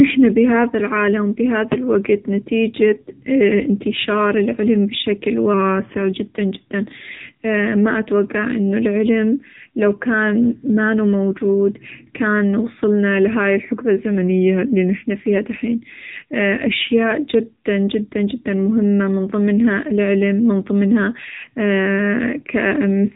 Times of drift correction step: 14.18-15.04

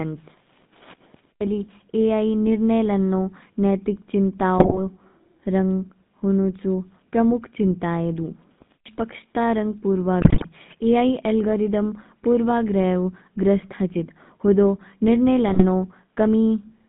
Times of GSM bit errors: 4.58-4.79, 10.20-10.45, 15.48-15.64

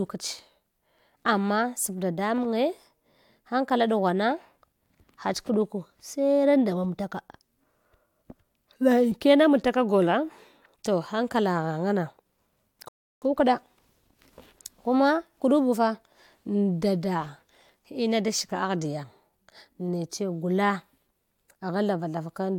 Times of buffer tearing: none

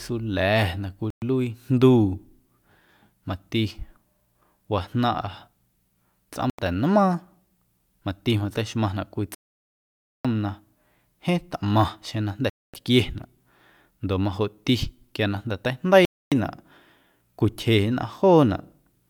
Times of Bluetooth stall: 1.10-1.22, 6.50-6.59, 9.35-10.25, 12.49-12.74, 16.05-16.32

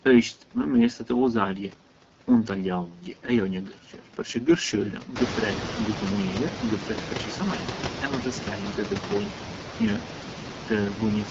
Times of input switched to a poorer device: none

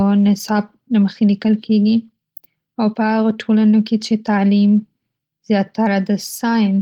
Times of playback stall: none

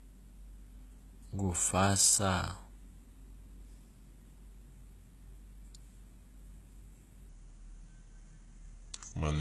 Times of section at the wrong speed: 7.29-9.41

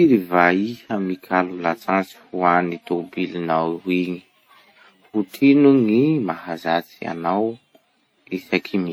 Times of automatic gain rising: none

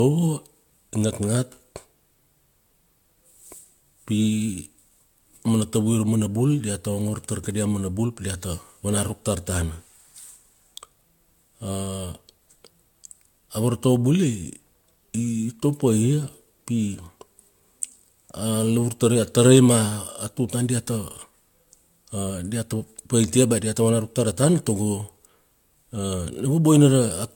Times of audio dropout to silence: none

